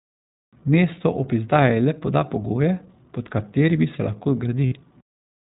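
Throughout this speech recording the audio is dull and boxed in, with nothing above 4 kHz, and the voice has a slightly rough, synthetic grain. That is iLBC codec damage, and it is plainly audible. The narrowband VoIP codec discards everything above 4 kHz and rebuilds each frame's excitation independently of the one before, which roughens the voice. The character points to the 15.2 kbps mode with 20 ms frames. From 4.66 to 4.74 s, about 60 ms, the voice briefly turns into a held, faintly buzzy vowel before snapping straight back to normal. These are lost iLBC frames, which fits three consecutive 20 ms packets going missing. The decoder filled the gap by repeating the last pitch cycle mixed with noise. Because each iLBC frame stands alone, the voice recovers almost immediately once real frames arrive again.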